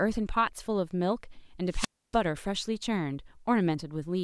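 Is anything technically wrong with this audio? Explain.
Yes. From 1.70 to 2.18 s there is a wireless microphone squelch dropout: the analogue FM radio link weakens until the receiver's squelch gate closes and mutes its output. The speech gives way to a brief surge of hiss, then a 285 ms hole of near silence before it returns.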